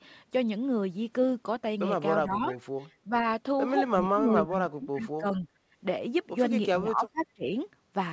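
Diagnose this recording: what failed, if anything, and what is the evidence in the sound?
Speech suppressed in double talk, in the call processing stage. The speech level sags at 2.23–2.56 s and 3.05–3.27 s by about 10 dB, then more deeply, about 25 dB, across 4.01–5.47 s and 6.77–7.54 s. This is likely the echo canceller ducking the near talker while the far side speaks.

Echo leak, also in call processing. Faint delayed copies of the speech surface briefly at 2.52–2.58 s and 4.50–4.58 s, about 25 dB and about 30 dB below the speech, trailing it by 401 ms. This likely comes from loudspeaker pickup that the far end's canceller failed to remove fully.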